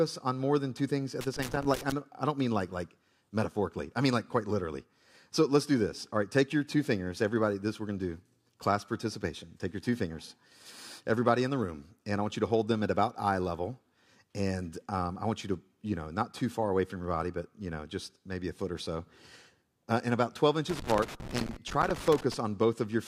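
At 1.21 s, right after "more than two things", loose connector crackle breaks out and runs to 1.92 s, clearing before "I do not mean". A worn or dirty contact is making and breaking as it shifts, chopping the signal into an irregular scratchy burst with pops where any DC on the line jumps. The same crackle returns from 20.70 s to 22.34 s, lasting longer, about 1.6 s.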